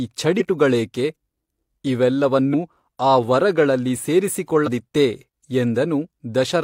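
At 0.36, 2.50 and 4.63 s the speech jumps ahead, losing roughly 0.2, 0.1 and 0.3 s, as compressed frames are skipped, which fits whole 42.7 ms frames going missing. Unlike a dropout, no silence replaces them.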